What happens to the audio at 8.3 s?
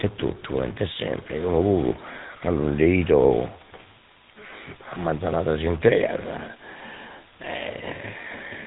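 At 8.3 s the speech carries the same two faults that run through the whole clip. The first is a distortion, likely a stuck bit: one data bit held fixed, so values are off by its weight. Pauses fill with hiss, and the waveform shows a flat noise floor where silence should be.

The second is the gravelly roughness of the GSM full-rate codec, which rebuilds the voice from a vocal-tract model driven by sparse, regular pulses. Its damage is plainly audible, and the sound fits a 13 kbps coder. On a spectrogram everything above 3.8 kHz is empty.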